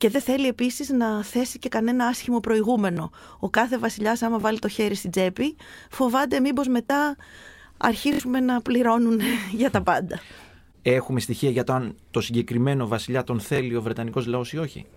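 Repeated buffer stutters at 2.93–2.97, 4.41–4.44, 6.87–6.90, 8.13–8.20 and 13.56–13.58 s: late audio made the device replay 23 ms chunks (fits a 1024-sample buffer), giving hard-joined stutters.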